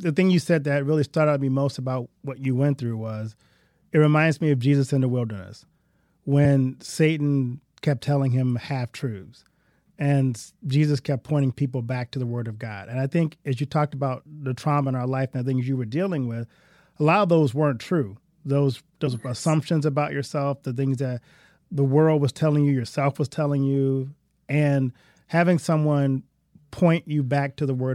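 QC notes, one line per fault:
6.44 s and 19.06 s, compressed frames skipped. The speech jumps forward twice, losing about 50 ms at 6.44 s and about 70 ms at 19.06 s, just before "yes assumptions about yourself". The gaps fit two and three whole frames of about 26 ms each, missing or refused by the decoder.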